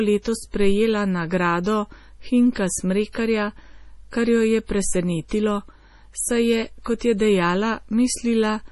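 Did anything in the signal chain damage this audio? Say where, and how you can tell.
Yes. At the codec stage, the whole clip sounds watery and swirly, with smeared consonant attacks and nothing above 11.5 kHz. That fixed treble cutoff and the heavy damage point to MP3 compression, likely at a low bitrate around 32 kbps, where weak frequency lines drop in and out between frames.

Also at the codec stage, pre-echo appears from 5.28 to 5.31 s: a short hiss, about 27 ms long, runs ahead of a sharp onset and softens it. The transform spread quantisation noise sized for the loud attack across the quiet start of its block.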